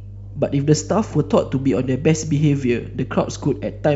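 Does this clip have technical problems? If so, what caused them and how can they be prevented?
Yes: mains hum runs throughout the speech, a steady 50 Hz tone roughly 15 dB below it, from a ground loop or nearby transformer. Prevent it with balanced cabling and a single ground point.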